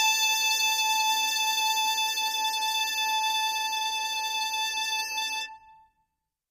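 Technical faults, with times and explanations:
Throughout, low-delay AAC compression: the music has likely passed through a low-delay AAC codec such as AAC-ELD at a rate that fits about 32 kbps. Its short frames resolve harmonics poorly, so the sound turns plainly rough and grainy, with noise between the harmonics.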